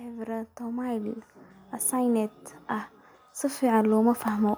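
The speech and its background swell up together twice, from 0.05 to 1.32 s by about 6 dB and from 1.9 to 4.53 s by about 7 dB. This is automatic gain rising: the gain control judged the input too quiet and slowly raised its gain.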